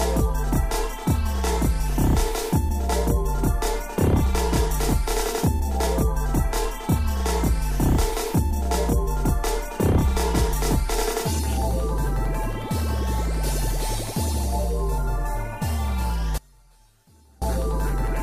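At 16.38 s the audio drops out abruptly for about 1.04 s, until 17.42 s. This is an audio dropout to a faint residue. The gap keeps a faint leak of the signal, roughly 30 dB down, which suggests the signal path likely broke while the downstream chain stayed live.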